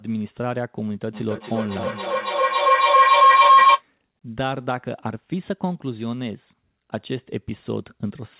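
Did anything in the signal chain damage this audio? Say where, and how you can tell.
Yes. From 1.14 s to 3.85 s a tone near 1 kHz swells out of the speech, pulsing about three times a second and peaking about 13 dB above it. That is feedback howl, and it arises in the call stage rather than in the equipment. Two devices in the same room are on the same call, so sound from one loudspeaker reaches the other's microphone and returns louder each time. The loop keeps boosting its preferred frequency until it is broken. The speech stays band-limited below 4 kHz throughout, which fits an ordinary G.711 call path.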